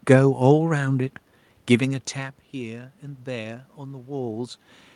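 No technical faults can be heard in the signal: the background noise belongs to the room itself, and the changes in level around 2 s and again near 4 s come from the talker moving relative to the microphone, not from anything in the system.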